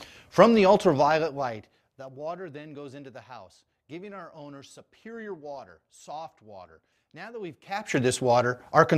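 From 0.84 to 2.21 s, zipper noise ticks through the sound as the level falls by about 20 dB. The gain moves in unsmoothed 2 dB steps, about ten a second. Each step clicks. From 7.62 to 8.01 s, a faster zipper, about forty steps a second, rides a rise of about 20 dB.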